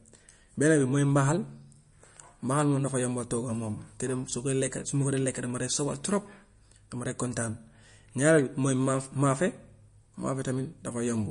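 Likely MP3 compression at a starved bitrate runs throughout the speech, with the encoder cutting everything above 10.6 kHz and dropping weaker frequency lines frame by frame. The result is plainly audible: a dull top end, watery swirling, and chirpy, smeared consonants.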